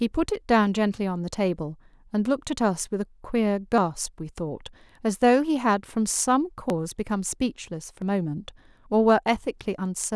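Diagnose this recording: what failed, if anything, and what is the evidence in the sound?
Speech skips ahead, without any gap, at 0.94, 3.78, 6.7 and 8.02 s, losing roughly 20 to 70 ms each time. The fault is at the driver or buffer stage, likely a dropped buffer (overrun): samples were overwritten before being read, and the edges were joined directly.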